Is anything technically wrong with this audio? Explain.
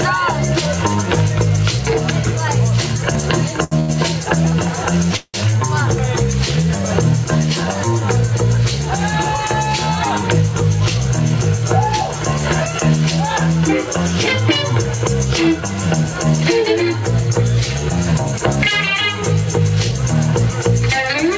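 Yes. There are two short stalls from late packets, one call audio freeze, and a jitter buffer speed-up. All of it sits on top of a call path whose sound stops at 8 kHz, which fits the G.722 codec.

Short stalls from a late packet occur at 3.64 to 3.74 s and again at 3.79 to 3.91 s. In each case a packet was not there when due, so the jitter buffer ran dry. The receiver stretched the last sound, by 75 ms and then 89 ms, and resumed from the same point. Nothing is lost. A sound is held too long, with a buzz or dip, and the delay grows each time.

The call audio freeze runs from 5.16 to 5.37 s. The sound stops moving forward for 175 ms. The last sound is drawn out and fades, and the final 50 ms of the gap is silent. Then the audio carries on from where it stopped, with nothing missing. This was likely caused by packets held up on the way, emptying the jitter buffer, with concealment filling the wait.

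The jitter buffer speed-up runs from 17.9 to 21.1 s. The buffer held more audio than it aims for. To shrink that delay, the receiver cut many short pieces of one or a few pitch periods. Together they add up to about a tenth of a second. Playback runs at 103% speed with the pitch unchanged. That is below the point where audio starts to sound hurried.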